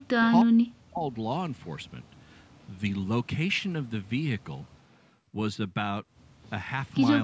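From 0.00 to 0.24 s and 0.43 to 1.09 s, the echo canceller likely mistook double talk for loudspeaker echo and turned the speech down. This is speech suppressed in double talk, with dips of around 40 dB.

From 2.08 to 2.66 s and 4.69 to 4.97 s, the far side's echo canceller let some loudspeaker pickup through, likely an echo leak. A copy of the speech returns about 0.32 s late, roughly 40 dB under the speech.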